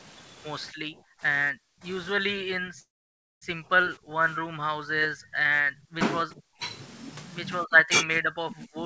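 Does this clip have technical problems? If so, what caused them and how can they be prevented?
Yes. Speech suppressed in double talk, likely from an echo canceller that could not tell the near talker from loudspeaker echo while both sides spoke, pulls the speech down by about 40 dB at 0.72–1.22 s, 1.52–1.84 s, 5.63–6.01 s, 6.25–6.61 s and 7.65–8.86 s, and by about 20 dB through 2.19–5.41 s, so it dips and breaks into fragments. Better echo cancellation with proper double-talk detection, or headsets that keep loudspeaker sound out of the microphone, would prevent this.

A call audio freeze at 2.80–3.44 s likely came from packets held up in transit and an emptied jitter buffer. The receiver padded about 0.6 s, nearly all of it silence, and then resumed where it stopped, so the speech is delayed rather than lost. A steadier network path, or a jitter buffer allowed to grow under varying delay, would prevent it.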